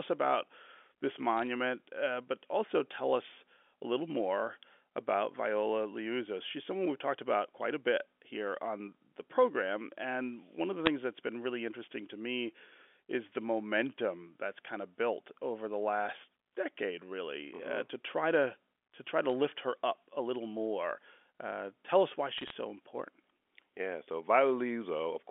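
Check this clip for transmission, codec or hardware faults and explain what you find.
The clip has one fault, bit errors on a digital phone line, in four short bursts. The audio comes over a G.711 mu-law telephone channel, audibly limited to about 300 Hz to 3.5 kHz.

Bit errors on a digital phone line occur at 1.39–1.47 s, 10.86 s, 19.30 s and 22.38–22.50 s. Individual bits in the 8-bit logarithmic samples were flipped, at a low rate of a few tenths of a percent or less. Each corrupted bit throws one sample to a wrong value. When a high-order bit or the sign of a loud sample is hit, the sample jumps far from its neighbours, producing sharp ticks and brief crackle over the speech.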